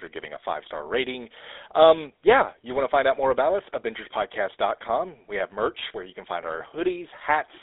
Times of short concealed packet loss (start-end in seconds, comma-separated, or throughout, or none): none